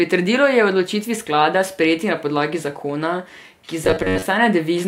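From 3.85 to 4.25 s, just after "na podlagi zakona ki", new audio likely stopped arriving in time, so a short buffer of about 11 ms was replayed over and over for most of that stretch. The result is robotic sound from repeated short buffers: a rigid, metallic 93.8 Hz buzz that only loosely tracks the speech.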